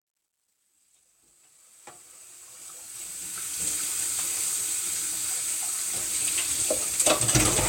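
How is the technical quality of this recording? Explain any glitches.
The quality suffers from one clear fault, at the opening. From 0.0 to 3.69 s the fade-in sounds gritty, worst from 0.0 to 2.32 s. This is truncation distortion on a fade. The gain stage kept too few bits without dither, which fits an 11-bit word length, so quiet passages collapse into coarse square steps before the level reaches full at 3.69 s.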